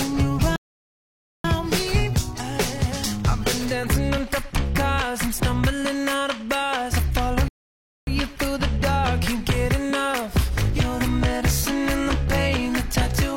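At 0.56 s the audio drops to silence until 1.44 s, a rebuffering stall adding 0.88 s, and again from 7.48 to 8.07 s, adding 0.59 s. Playback starved and resumed exactly where it paused. Waveform and spectrogram show flat, empty gaps.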